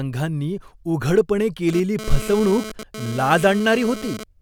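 At 1.69 s a GSM phone buzz cuts in under the speech and hangs around until 4.24 s. It's that hard, raspy rattle at 216.7 Hz, full of harmonics, and it has nothing to do with the talker. A 2G handset nearby is pulsing its transmitter, and the audio circuitry rectifies those radio bursts into sound. Here it comes and goes rather than sitting steady, which points to the phone doing a data transfer. It sits about 13 dB below the speech.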